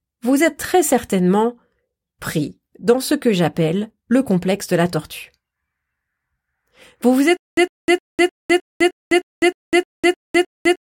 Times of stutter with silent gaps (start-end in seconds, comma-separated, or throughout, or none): 7.37-10.87